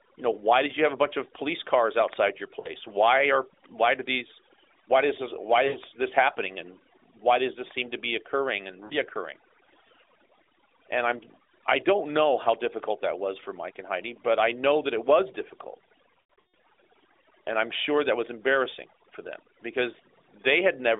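Throughout, the background sinks to near silence sprinkled with twinkling specks. This is overdone noise removal: a suppressor set too hard is switching off bands near its noise estimate and taking quiet speech detail with them, all within the narrow telephone band of the AMR narrowband codec.

At 2.60 s, 5.68 s and 8.86 s the speech briefly dips and warbles, then returns weak or rough. At 16.34 s a longer stretch is drawn out and fades before recovering. These are lost AMR speech frames: the decoder repeats the last good pitch and vocal tract settings at falling gain. The short gaps fit two or three lost frames, and the last fits a scattered run with about 140 ms lost in a row.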